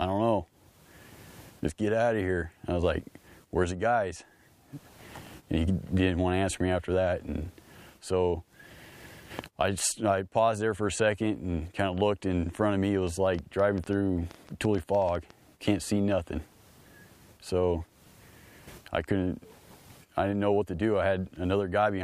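From 13.07 to 15.31 s, a train of clicks ticks over the sound, about 20 of them, unevenly spaced near 8.5 per second, likely interference.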